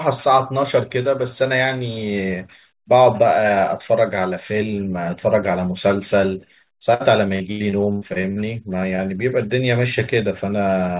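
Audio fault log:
6.94–8.38 s, repeated packet loss (robotic sound): Packets kept failing to arrive in time, leaving eight holes totalling about 380 ms, the longest 94 ms. Each was patched by stretching the preceding sound, so about a quarter of this stretch is synthetic, giving choppy speech with pieces missing.
8.96–9.00 s, short concealed packet loss: A single 20 ms piece of the stream failed to reach the decoder. The receiver extended the last sound across the hole and blended back into real audio. In this narrowband call, with nothing above 4 kHz, it is heard as a brief smear or wobble.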